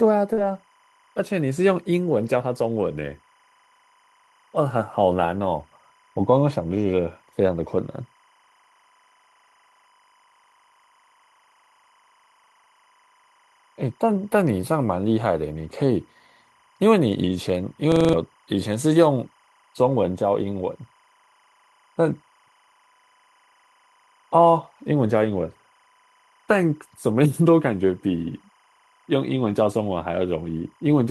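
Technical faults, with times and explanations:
Throughout: timecode bleed. Linear timecode running at 25 frames per second leaks into the signal, its square wave flipping between roughly 1 kHz and 2 kHz. It sits around 40 dB below the speech as a faint, steady chirping warble.
0.33–0.39 s: short concealed packet loss. About 40 ms of audio failed to arrive in time, so the decoder extended the preceding sound from its pitch or as shaped noise, then crossfaded back, leaving a brief smear where detail is missing.
0.37–0.39 s and 29.45–29.51 s: lost packet rebuilt from error correction. One packet at the first time and two at the second were replaced by low-bitrate copies carried in the following packets, covering 20 ms and 40 ms. There is no gap, but those frames sound coarser and noisier.
17.92–18.13 s: system hang loop. The host stalled while the audio hardware kept replaying one 42.67 ms buffer, which fits a 2048-sample ring buffer. 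It cycles five times at 23.4 Hz, a rapid stutter that replaces about a fifth of a second of real audio.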